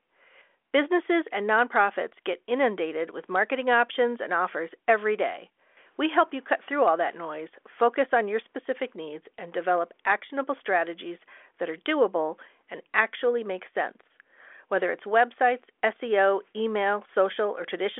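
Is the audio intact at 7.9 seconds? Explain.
Yes, at 7.9 seconds the speech is intact, carried by G.726 ADPCM working normally at 40 kbit/s with a telephone band of roughly 300 Hz to 3.4 kHz and nothing above 3.8 kHz.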